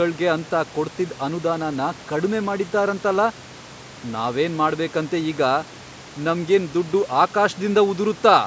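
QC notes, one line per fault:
No faults found: the speech carries nothing above 8 kHz, as expected from the call microphone processing, and room noise sits about 22 dB below it.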